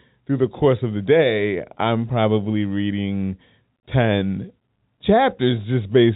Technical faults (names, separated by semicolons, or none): none